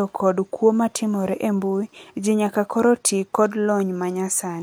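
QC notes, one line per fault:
Nothing stood out on listening to this speech recording.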